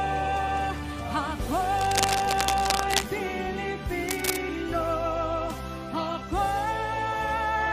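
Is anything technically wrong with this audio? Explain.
Yes. Cable scratch noise appears from 1.76 to 3.15 s and again from 4.06 to 4.37 s: dense, uneven scratching, roughly 5 dB below the sound. It is likely a worn connector whose contact resistance jumps as it moves, giving irregular bursts rather than the single sharp tick of a click.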